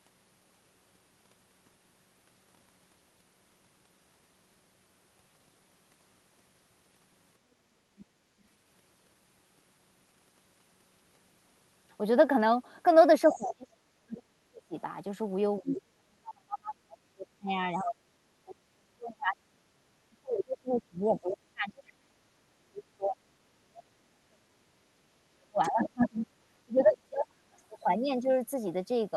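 From 7.99 to 8.05 s, 13.28 to 13.44 s, 15.70 to 15.74 s, 21.29 to 21.34 s, 25.63 to 26.06 s and 26.79 to 26.83 s, brief scraps of a second voice surface beneath the talker. This is the other side's voice leaking through, likely loudspeaker echo the canceller failed to remove. Most scraps sit far below the main voice, but the one near 15.7 s is almost as loud. A leak adds sound, whereas suppression takes it away.

From 13.31 to 14.75 s and again from 15.6 to 27.56 s, the talker's own voice is repeatedly pushed down, at its deepest by about 35 dB. This is speech suppressed in double talk, likely the canceller turning everything down while both sides spoke at once. The missing voice, not an added one, sets it apart from the leaks.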